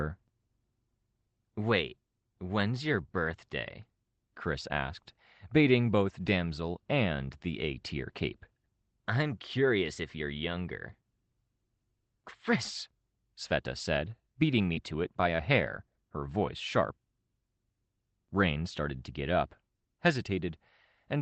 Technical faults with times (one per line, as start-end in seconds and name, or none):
14.73-14.77 short concealed packet loss